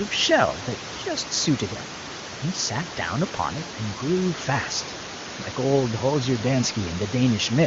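No technical fault can be heard in this speech recording: room noise sits about 13 dB below the speech, and the wideband coding is clear in a way that points to the top AMR-WB rate.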